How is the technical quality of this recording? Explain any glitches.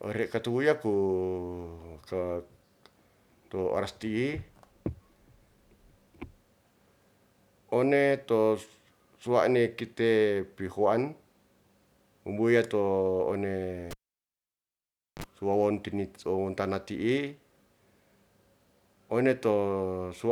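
The recording has one glitch, a cable pulled and plugged in. At 13.91 s there's a pop and the speech drops to near silence for about 1.28 s, while the live lead is out. As the plug goes back in, its tip touches first and picks up a 44 ms burst of 50 Hz mains buzz. A second pop at 15.24 s brings the sound back.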